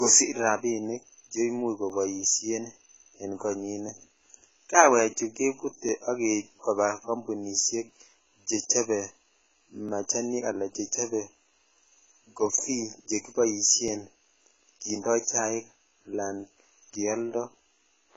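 From the start, the speech sounds dull, smeared and fizzy. Nothing is heard above 7.7 kHz. This is likely AAC compression, heavily damaged. Its hearing model discards detail and lowers the cut-off, which fits AAC-LC at about 16 kbps.

After "rabinik che imuch", periodic USB or driver dropouts begin at 1.90 s and run until 17.87 s. They recur every 2.0 s, about ten times. Each time the driver stalls and roughly 2 ms of sound is skipped. The result is a regular tick.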